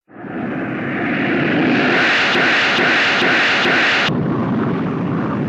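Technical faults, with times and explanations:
2.35–4.09 s, broken-record loop: a fragment about 0.43 s long plays four times in a row, identical each pass, so the sound stutters in a rigid, mechanical cycle before normal playback resumes at 4.09 s. The audio that belonged in that span never arrives and is replaced by the repeats. This is likely a stall in the player, encoder or stream, which kept outputting the last fragment in its buffer until fresh data came through.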